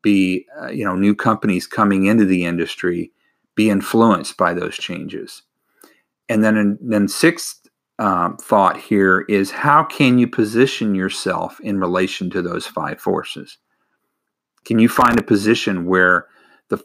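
From 14.94 to 15.20 s, processor overload crackle: about twenty sub-millisecond buffers missed, leaving rapid tiny silent gaps that form gritty tearing, unlike a single clean dropout.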